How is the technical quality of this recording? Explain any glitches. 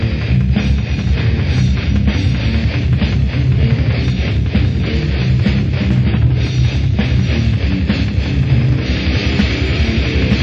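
The technical quality of the recording is good, with no glitches to explain.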